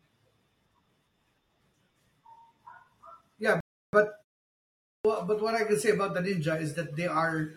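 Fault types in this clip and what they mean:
Rebuffering stall: The player ran dry of downloaded audio and halted until more data came in. At 3.60 s the speech drops to silence for about 0.33 s, then picks up exactly where it stopped, so nothing is missing but the clip runs longer.
Clipped start after a pause: The output device idled during a 0.56 s gap and had not fully woken or relocked when sound returned. From 4.72 to 5.05 s roughly 0.33 s of speech is swallowed, so it bursts abruptly out of silence without its opening sounds.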